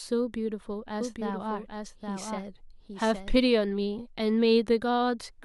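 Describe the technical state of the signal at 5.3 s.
At 5.3 s the audio is intact, with no audible fault in the signal at that moment.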